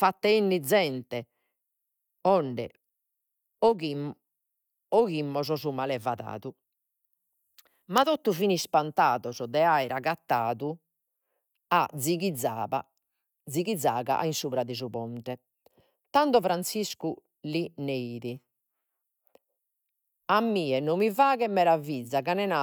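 No technical faults can be heard at any point in this speech recording. There is nothing to place on a timeline.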